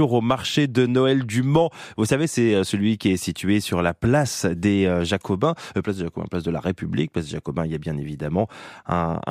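The speech recording shows no audible technical fault at any point.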